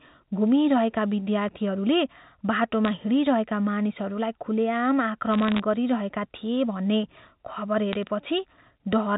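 At 2.85 to 2.93 s, 5.32 to 5.60 s and 7.93 to 8.03 s you get bit errors on a digital phone line. Flipped bits in the A-law samples (a few per thousand, the last burst lighter) spike single samples, giving sharp ticks and crackle over the speech.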